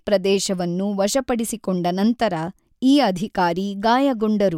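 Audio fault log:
No audible faults anywhere in this speech recording.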